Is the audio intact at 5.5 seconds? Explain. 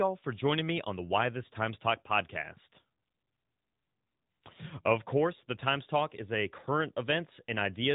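No. At 5.5 seconds the speech carries AMR narrowband mobile codec damage, which runs through the whole clip rather than appearing as a local event. The codec resamples to 8 kHz and rebuilds the speech from a vocal-tract filter driven by a few pulses per 5 ms subframe of each 20 ms frame, so nothing above about 3.8 kHz survives. The coding damage is plainly audible, which fits an upper-rate AMR-NB mode of around 10.2 kbps.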